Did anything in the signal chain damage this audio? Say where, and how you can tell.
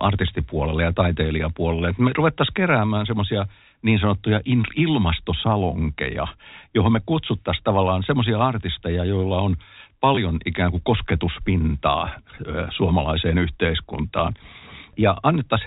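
Yes. At the network stage, 20 ms of audio went missing at 10.15 s, just after "artisteja joilla on". The receiver concealed it with packet loss with last packet repeated, so the repeated packets produce a brief robotic stutter.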